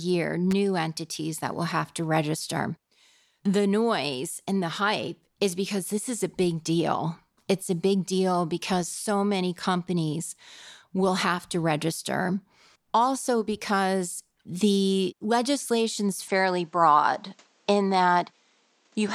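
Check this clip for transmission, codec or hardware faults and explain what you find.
Two faults stand out: a brief hardware crackle near the start and a change in tone over the last few seconds.

Loose connector crackle, at 0.51 s, just before "entities that will have". A worn or dirty contact briefly lost and regained connection, chopping the signal and adding pops from any DC on the line. It lasts only about 20 ms, so it comes across as a single short burst of scratchy crackle rather than a sustained noise.

Input switched to a poorer device, from 16.28 s to the end, right after "because the legislation's". The recording likely moved mid-take to a different microphone or a headset's call profile. After the switch nothing is heard above about 8.7 kHz, so the sound turns duller and boxier. It also gains a new background noise floor roughly 40 dB below the speech. The change is immediate, with no gap at the switch and no obvious jump in level.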